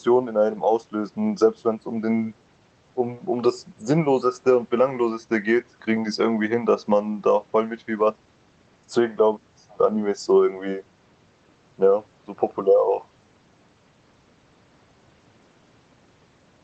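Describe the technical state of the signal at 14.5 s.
At 14.5 s the speech is intact, with no fault; it still carries the ordinary character of the call path it passed through.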